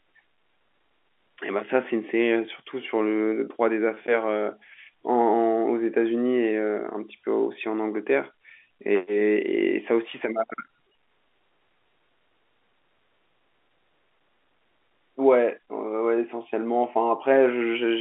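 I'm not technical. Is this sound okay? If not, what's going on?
Yes, there's nothing wrong with this speech recording. It has the narrow, phone-line quality of G.711 telephone coding, which is how ordinary landline calls normally sound.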